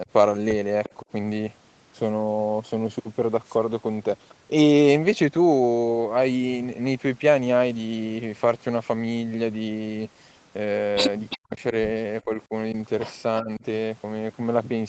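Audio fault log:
0.84–0.94 s and 11.30–11.38 s, echo leak: a delayed copy of the sound, trailing by 352 ms, surfaces briefly at about 15 dB and then about 10 dB below the speech. This is likely a far-end loudspeaker whose echo canceller let residual pickup back into the call.
1.01–1.08 s, 11.35–11.74 s, 12.25–12.52 s and 13.41–13.64 s, speech suppressed in double talk: the talker's level dips, by roughly 30, 40, 10 and 15 dB. Both sides were likely speaking at once, and the canceller, unable to separate talker from echo, attenuated both.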